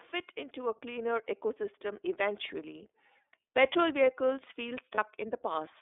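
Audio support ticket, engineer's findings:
iLBC codec, throughout: audio confined to roughly 300 Hz to 3.6 kHz, slightly rough and synthetic texture. Each frame's excitation is coded on its own, consistent with the 30 ms, 13.33 kbps mode.

Lost iLBC frames, 4.95 to 4.98 s, just after "vehicles feel": brief held, buzzy vowel. The decoder repeated the last pitch cycle with noise, which fits one lost 30 ms frame. Audio recovers immediately.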